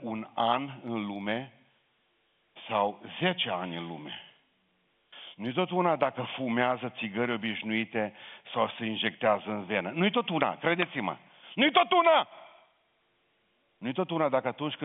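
No technical faults can be heard in this speech clip, which carries the narrow band of an ordinary G.711 telephone line.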